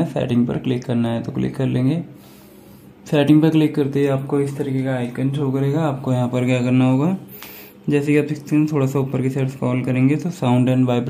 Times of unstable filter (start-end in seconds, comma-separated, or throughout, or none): none